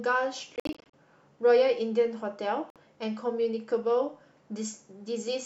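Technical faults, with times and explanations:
0.56–0.94 s, Bluetooth dropout: the speech stutters through several silent holes, about 205 ms lost over 373 ms, longest 56 ms. Likely packets reaching the headphones too late and getting dropped.
2.70–2.76 s, Bluetooth dropout: a single 56 ms hole. The speech resumes further along, as though it kept playing underneath, likely another late packet burst.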